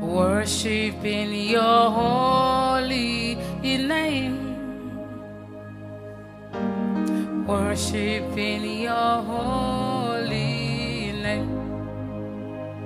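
No technical faults can be heard anywhere in this clip.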